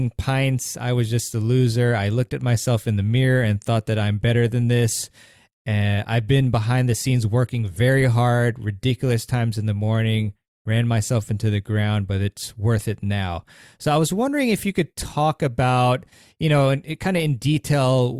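No technical faults are audible.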